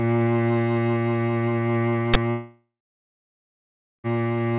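At 2.14 to 2.16 s, an uninitialised buffer, consistent with a 1024-sample block, plays leftover memory as a loud digital noise burst. It shows as a tall waveform slab and a broadband vertical stripe, reaching the 4 kHz ceiling of the G.711 call path.

From 2.3 to 4.07 s, a long network dropout, likely from lost packets, cuts the music. The last sound continues as a fading buzz, then roughly 1.3 s of near-silence follows, seen as a flat waveform and an empty spectrogram until the music resumes.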